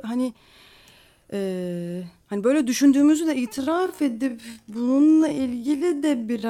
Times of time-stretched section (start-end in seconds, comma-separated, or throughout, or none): 3.50-6.50